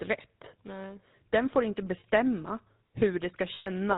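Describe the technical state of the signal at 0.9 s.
At 0.9 s the speech carries GSM full-rate codec damage, as it does across the whole clip. The codec models the vocal tract as a filter. It excites that filter with evenly spaced pulses and keeps only every third excitation sample. The rate it sounds like fits the 13 kbps full-rate mode. Nothing above 4 kHz survives, so the top end is gone. The damage is plainly audible as a buzzy, gravelly roughness on the voice.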